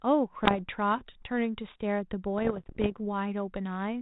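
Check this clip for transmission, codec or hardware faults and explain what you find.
Two bursts of bit errors on an ADPCM link stand out, over a telephone-band codec whose light coding damage and cut-off near 4 kHz fit 32 kbit/s G.726. From 0.38 to 0.60 s and again from 2.38 to 2.94 s, flipped bits, at a rate of roughly half a percent, corrupt the decoder's step size and predictor, so each error rings on for milliseconds. You hear pops and rough, gritty bursts with brief jumps in level. A waveform shows spikes and sudden amplitude steps, and a spectrogram shows broadband vertical streaks up to the band edge.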